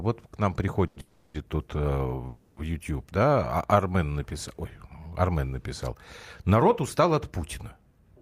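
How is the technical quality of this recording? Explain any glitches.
The recording has three glitches in the speech, all in its first few seconds, caused by packets arriving late on a call.

Short stall from a late packet, 0.87 to 0.99 s, right after "вот к нам": one packet missed its slot and the jitter buffer ran dry. The receiver stretched the last sound by about 90 ms until the packet arrived, so that sound is held too long, with a slight buzz or dip. Nothing is lost.

Call audio freeze, 1.00 to 1.37 s, again just after "вот к нам", and 2.28 to 2.60 s: packets were likely held up in transit, leaving the buffer empty. The receiver extended the last sound as a fading buzz or hiss, about 340 ms and 290 ms long, without dropping to silence. When the packets arrived, the audio resumed where it had stopped, so each freeze inserts a pause and nothing is missing.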